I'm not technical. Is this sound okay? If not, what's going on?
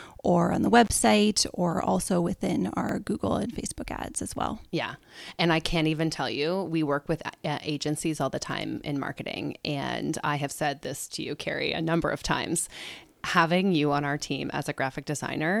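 No, there are two small glitches in this speech recording.

The first is an intermittent contact, from about 0.84 to 0.92 s, right after "or on the". A loose cable or plug briefly lost its connection, so the speech drops out for about 33 milliseconds. You hear a crackle where it cuts out and again where it comes back, and a faint hiss in between. It's quick.

The second is a block of digital silence at 2.89 s, just after "or also within". For a tiny fraction of a millisecond the recording went silent, which likely happened because the recording software didn't deliver its next chunk of audio in time. The sound stops and restarts instantly with no fade, so at that length it comes across as a single sharp tick.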